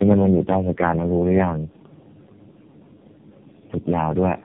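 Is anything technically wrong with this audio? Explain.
Yes. Throughout the clip there is tandem speech coding. The speech sounds like it passed through about four low-rate speech codecs in succession, with AMR-NB likely last, each re-encoding the previous one's errors. The result is rough, muffled, warbly speech with nothing above 3.5 kHz.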